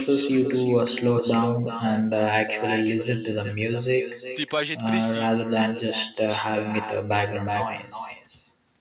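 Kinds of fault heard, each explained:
Echo with no canceller, throughout the speech: the far end is playing the call through a loudspeaker, its microphone picks that playback up, and nothing at that end removes it, so each phrase returns after the network round trip. Here the copy trails the original by roughly 0.4 seconds, sitting about 9 dB below it, thinner, and it stays band-limited to 4 kHz like the rest of the call audio.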